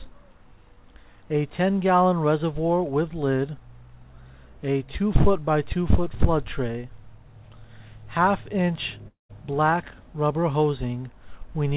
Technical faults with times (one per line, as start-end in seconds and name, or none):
9.08-9.31 long network dropout